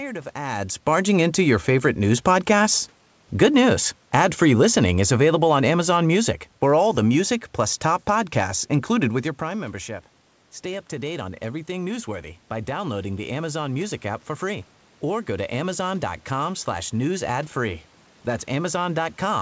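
From 0.34 to 2.84 s, automatic gain rising: the gain control judged the input too quiet and lifted it about 4 dB, so speech and room noise swell together. From 3.38 to 7.25 s, automatic gain falling: the control then judged the input too loud, pulling gain down about 5 dB, so speech and background sink together until "plus top podcasts included".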